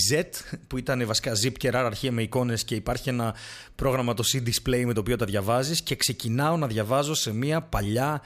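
Listening to the speech recording, nothing stood out as a technical fault at any point.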